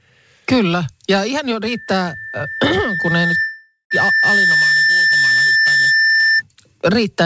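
Just after "ihan jo", at 1.66 s, a loudspeaker feedback squeal begins. A single tone at 1.8 kHz swells over roughly three seconds until it sits about 5 dB above the speech, and it lasts until 6.42 s. The microphone is picking up the loudspeaker it feeds, and at that one frequency the loop gain exceeds unity. That gradual swell on one pitch marks it as feedback rather than a steady interference whistle, which would start at full level.

Inside that stretch, from 3.41 to 3.93 s, comes a call audio freeze, likely caused by packets stalling in transit until the jitter buffer ran dry. The receiver stretches the last sound into a buzz that fades, ending in about 130 ms of silence. When the speech resumes it continues exactly where it stopped, roughly half a second late. Nothing has been skipped, which separates a freeze from packet loss, where a piece of the speech would be missing. The G.722 call path passes nothing above 8 kHz, so the 1.8 kHz squeal comes through in full.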